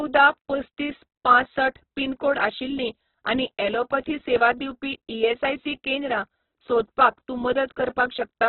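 Throughout, the speech sounds grainy, rough and noisy, with nothing above 4.1 kHz, likely from heavy Opus compression at a very low bitrate, near 8 kbps.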